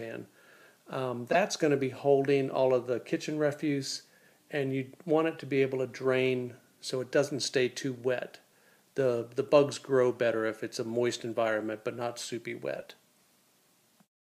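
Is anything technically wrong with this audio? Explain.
Yes. Corrupt frame decoded at 1.32 to 1.35 s and 12.77 to 12.84 s: damaged compressed frames were decoded anyway, putting misplaced energy into the sound. The first error peaks around -10 dBFS, the second around -30 dBFS.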